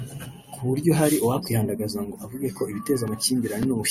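Listening to the speech here, nothing stood out as a technical problem at any point.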